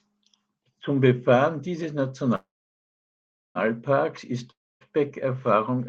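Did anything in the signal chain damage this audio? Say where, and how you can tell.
Yes, at two points, both at the network stage of the call.

The first is a call audio freeze from 2.35 s to 3.58 s. The last sound carries on briefly as a fading buzz, then about 1.1 s of silence follows before the audio resumes exactly where it stopped, with nothing skipped. The cause is likely packets delayed in transit, draining the jitter buffer. What separates it from a dropout is that the whole stream is pushed about 1.2 s later, and no content is lost.

The second is a long network dropout from 4.51 s to 4.84 s. Again the last sound smears into a decaying fill, with about 0.27 s of near-silence, but when audio returns it has jumped ahead. Roughly 0.3 s of material is simply gone. That missing stretch distinguishes it from the freeze: here the packets likely never arrived, rather than arriving late, so playback continues further on instead of catching up on what was held back.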